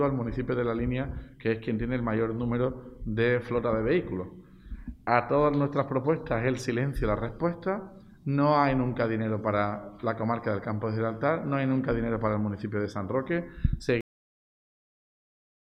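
The final buffers were never written out, producing a cut-off end at 14.01 s: the sound stops abruptly mid-event, with no natural decay, and falls straight to digital silence that lasts for the remaining 1.7 seconds or so of the clip.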